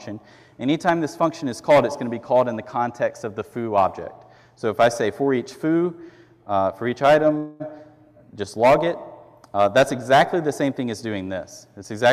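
At 7.37 s the packets were likely held up in transit, so the jitter buffer ran dry and the receiver had nothing new to play. It stretched the last stretch of sound into an artificial continuation that fades, filling about 225 ms without dropping to silence. This is a call audio freeze. When the delayed audio resumed at 7.62 s, it picked up exactly where it had stopped. Nothing was lost, but the delay grew by those 225 ms.

At 7.78 s a skip ahead follows. A short stretch of audio never reached playback, either lost in transit or discarded by an overflowing jitter buffer, while later material was already queued. Playback jumps forward across a splice of only about 4 ms, ending by 7.80 s. Around 70 ms of audio is missing, and the two sides are butted almost directly together. This takes back roughly 50 ms of the delay that the freeze had added.

From 8.13 to 8.46 s the jitter buffer was short of reserve, so the receiver repeated single pitch periods or slices of pauses in succession to build delay back up. 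This jitter buffer slow-down adds 54 ms, so the passage runs at about 86% speed with unchanged pitch. Sounds in that span come out drawn out.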